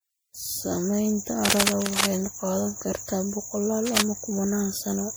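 Throughout, the speech has likely passed through repeated lossy MP3 encoding, generation loss, leaving it swirly, smeared and hollow, with blurred consonant attacks. From 1.45 to 2.06 s, and again from 3.86 to 4.02 s, a worn cable or connector was likely disturbed, producing cable scratch noise: uneven scratching bursts roughly as loud as the speech.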